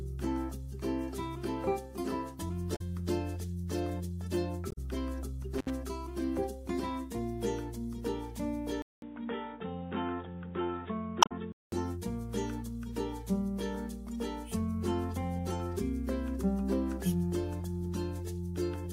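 A short glitch breaks through at 2.73 to 2.81 s and again at 4.69 to 4.78 s. Both are damaged data in the compressed stream. Corrupted bytes leave the decoder unable to read those frames, so it loses sync and jumps to the next valid frame header, producing the audible glitch.

At 5.58 to 5.70 s the sound cuts out for about 64 ms, with crackle on both edges and only faint hiss while it is gone. This is an intermittent contact: a loose cable or plug opened briefly, dropping the signal, and the crackle comes from the connection breaking and remaking.

From 8.82 to 11.72 s, after about 200 ms of silence, the audio turns dull and boxy. Nothing comes through above 3.8 kHz, and a new background noise floor sits well below the signal, with little change in overall level. The likely cause is an input switched to a poorer device. A narrower-band microphone or headset call profile would cut the top end and bring its own noise.

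Inside that stretch, at 11.20 to 11.32 s, another glitch marks a third instance of damaged compressed data, where the decoder again lost its place and resynchronised.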